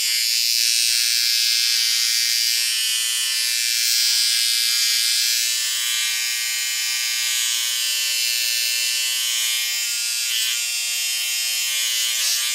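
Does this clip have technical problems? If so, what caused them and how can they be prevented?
No, the recording of sounds carries an intact signal throughout, with no technical problem to trace or prevent.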